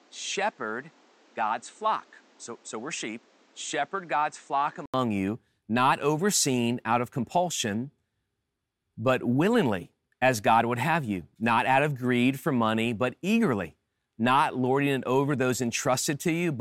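From the start to 4.94 s the speech is dull and quieter, by roughly 5 dB, with nothing above 8.6 kHz and a new background noise about 30 dB down. This likely comes from an input switched to a poorer device. Unlike a bandwidth drop, tone, level and noise change together, then clear after an 80 ms silence.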